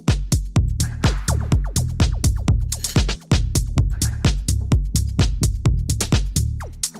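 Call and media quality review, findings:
Skip ahead at 3.15 s: about 0.7 s of audio missing, with no silence inserted. The two sides join almost directly. This is queued audio lost in transit or discarded by the jitter buffer, unlike a dropout, which leaves a gap.

Jitter buffer speed-up from 3.25 s to the end: playback runs at 103% at unchanged pitch, trimming roughly 0.1 s overall. Repeated pitch-period removal drains the excess delay. Pitch stays put, unlike a resampling error.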